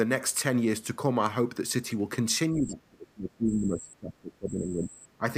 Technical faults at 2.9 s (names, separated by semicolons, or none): speech suppressed in double talk